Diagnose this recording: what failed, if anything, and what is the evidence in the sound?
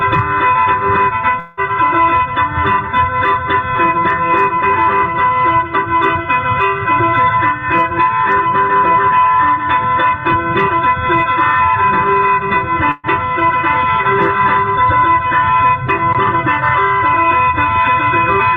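From 1.39 to 1.60 s the audio stops advancing and the last sound is stretched into a fading buzz or hiss for 178 ms, without falling to silence. It resumes with 180 ms gone. This is likely a long network dropout concealed by the receiver.

A burst of packet loss at the network stage occurs from 12.91 to 13.06 s. Lost or late packets left a gap that the receiver filled for 122 ms by extending the preceding sound while turning it down. The audio resumes with 120 ms missing.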